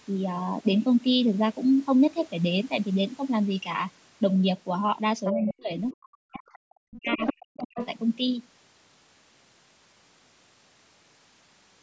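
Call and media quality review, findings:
Other side's voice leaking through at 5.25–5.54, 6.46–6.59, 6.95–7.33 and 7.57–7.87 s. A second voice bleeds in, from faint to nearly as loud as the talker around 7 s. Likely the echo canceller leaving loudspeaker pickup in the mic signal.

Speech suppressed in double talk at 5.33–5.71, 5.92–6.44 and 6.68–7.78 s. Talker's voice drops out in chunks, dipping roughly 40 dB at worst. Likely the echo canceller failing to separate the two and ducking everything.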